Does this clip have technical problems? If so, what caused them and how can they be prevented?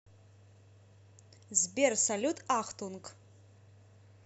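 No technical faults are audible.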